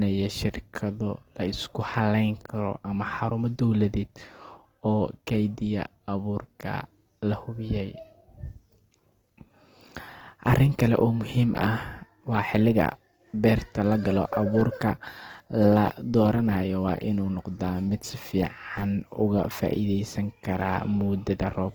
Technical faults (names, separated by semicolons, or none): Opus compression